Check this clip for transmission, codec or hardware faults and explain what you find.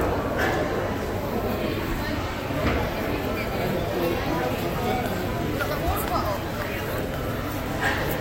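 No faults are audible anywhere in this recording.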